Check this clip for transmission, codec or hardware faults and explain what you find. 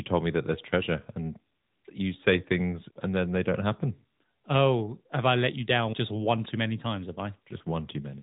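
One fault runs through the whole recording: AMR narrowband mobile codec damage, plainly audible from start to end. The speech is squeezed through an 8 kHz mobile speech coder that rebuilds the voice from a vocal-tract model excited by a few pulses per 5 ms subframe, and nothing above 3.8 kHz survives. The coarse pulse modelling gives the speech a buzzy, synthetic edge, and the buzz level fits a mid-rate mode around 10 kbps.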